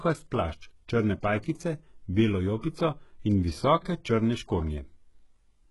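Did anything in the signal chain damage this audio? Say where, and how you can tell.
Yes, at the codec stage, most likely HE-AAC compression at a very low bitrate, around 12 kbps. The audio is heavily damaged throughout: nothing sounds above about 11.5 kHz, and the treble below that has a synthetic sheen that doesn't track the lower harmonics. That comes from spectral band replication, where only the lower band is truly coded and the upper band is patched in from copies under a coarse envelope, so s sounds in the speech come out gritty and lispy.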